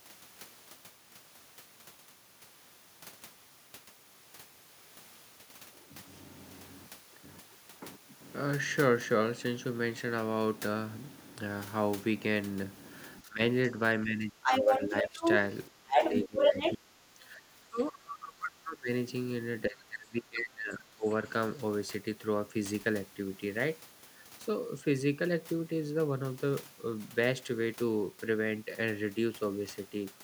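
Speech suppressed in double talk at 13.21 to 13.41 s and 14.02 to 15.24 s: the speech dips by about 15 dB, likely because the echo canceller treated overlapping talk as echo and attenuated it. Other side's voice leaking through at 14.43 to 14.82 s and 15.18 to 15.57 s: a second voice is heard at about 5 dB relative to the speech, likely residual loudspeaker echo left in the microphone signal. Speech suppressed in double talk again from 15.69 to 18.89 s, dropping by up to about 25 dB, with the other side's voice leaking through from 15.91 to 16.73 s. A final suppression from 19.68 to 21.15 s pulls the speech down by as much as about 25 dB.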